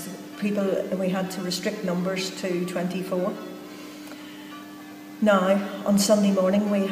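No technical faults are audible.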